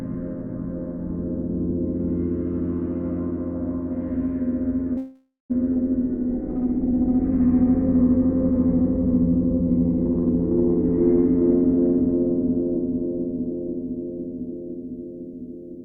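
A recording of everyday sounds with four network-playback faults clustered in its middle. From 4.97 to 5.52 s there is a call audio freeze. The sound stops advancing and the last moment is stretched into a decaying fill for about 523 ms, the final 190 ms of it silent. It then resumes exactly where it left off, so nothing is lost but the timeline is pushed back by roughly half a second. The likely cause is packets stalling in transit long enough for the jitter buffer to run dry. At 5.74 to 5.77 s comes a skip ahead. Only a 16 ms join bridges the two sides, and about a third of a second of audio is simply gone, with the material before and after butted together. This fits the buffer discarding a backlog of late-arriving audio to claw back the delay that built up during the freeze. From 6.04 to 10.22 s a jitter buffer slow-down follows. Playback runs at 92% speed with pitch unchanged, because the receiver repeats tiny pitch-period-sized slices over and over to rebuild its reserve. 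That stretches sustained sounds slightly and adds 322 ms in total, which can leave a faint warble on tonal content. From 10.73 to 13.27 s the opposite occurs as a jitter buffer speed-up. The receiver trims short slices repeatedly, running the audio at 121% speed with pitch held, so events feel rushed and closer together. Roughly half a second of material is removed as the buffer sheds excess delay.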